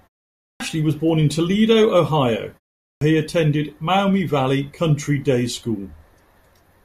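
At 0.48 s and again at 2.91 s, a clipped start after a pause cuts in: the output path, idle through the preceding silence, wakes late, swallowing about 120 ms before "was born in" and 100 ms before "he attended". Each onset snaps abruptly from flat silence into mid-sound energy, with no gradual attack visible in the waveform or spectrogram.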